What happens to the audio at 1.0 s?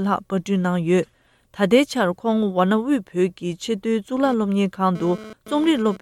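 At 1.04 s there is damaged data in a compressed stream. The decoder misreads corrupted frames and loses sync, producing a brief chirp or blip.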